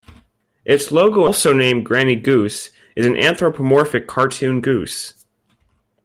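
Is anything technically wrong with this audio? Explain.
Yes, two timing faults are audible.

At 1.27 to 1.29 s there is a skip ahead. Roughly a second of speech was discarded while later audio was already waiting, so playback jumps forward and the two sides are joined with no fill. Unlike a dropout, there is no silence or concealment at the join. The speech simply lurches on with a piece missing.

From 1.93 to 2.45 s the jitter buffer speed-up trims short pitch-period slices repeatedly to drain excess delay. The speech runs at 107 % speed, losing a few tens of milliseconds, and sounds slightly hurried. Unlike resampling, the pitch stays unchanged.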